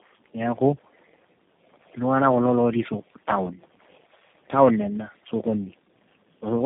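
From start to finish, the speech shows tandem speech coding. It sounds decoded and re-coded through four speech codecs in turn, which fits a chain ending in G.729A. Each stage compounds the last. The result is rough, muffled and warbly, with nothing above 3.8 kHz.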